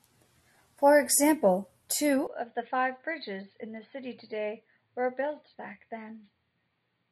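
Partway through this speech recording, at 2.27 s, the input most likely switched to a poorer device, such as a different microphone or a headset running its narrowband call profile, and stays there to the end. There is no gap at the changeover. From that point the sound loses everything above 4.7 kHz, so it turns dull and boxy, drops to roughly 10 dB quieter, and carries a faint new background noise well below the speech.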